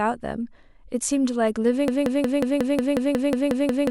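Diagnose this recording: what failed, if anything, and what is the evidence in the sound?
From 1.88 s to the end, a 0.18 s fragment of speech repeats exactly, about twelve times: a broken-record loop, likely a stalled player or stream resending its last buffered fragment.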